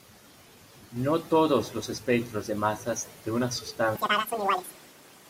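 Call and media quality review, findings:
Audio read two samples at a time (double speed), 3.95 s to end of clip. Speech jumps to 2x speed, a full octave (12 semitones) higher. Probable decoder/format mismatch: sample pairs consumed as single frames, as if stereo or double-width samples.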